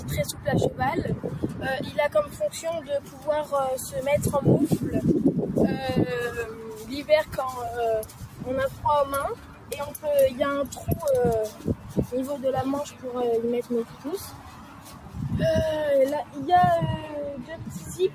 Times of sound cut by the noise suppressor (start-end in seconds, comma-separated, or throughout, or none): 0.00-2.40, 2.81-3.27, 6.53-6.85, 8.04-8.85, 9.35-9.99, 11.51-11.96, 13.85-15.16, 17.50-18.14